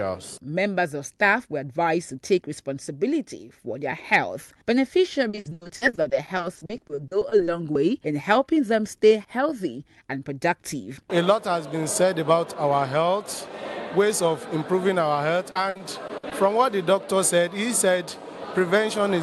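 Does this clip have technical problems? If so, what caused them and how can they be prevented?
Yes, there's repeated packet loss (robotic sound) from 5.29 to 7.49 s and again from 15.51 to 16.33 s. Dropouts get patched by stretching the previous sound, so it turns choppy with pieces missing. A larger jitter buffer, a steadier network, or forward error correction would prevent it.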